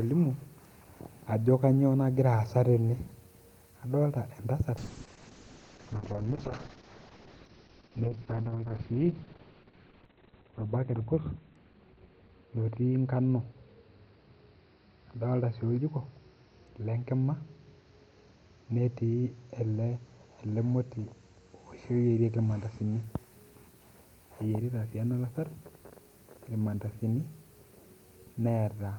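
Call bitrate drop, 4.79 to 23.09 s: starved of bits, the codec removes everything above 4 kHz, leaving speech muffled and rough, consistent with about 6 kbps.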